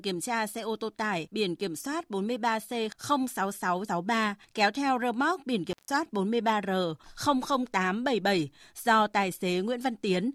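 Right after "theo rơ móc biển", at 5.71 s, there's an intermittent contact: a loose cable or plug briefly losing connection. The speech drops out for about 150 ms, to 5.9 s, with crackle at both edges and faint hiss while the line's open.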